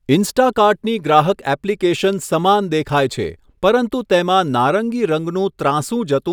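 Speech recording; no technical faults found.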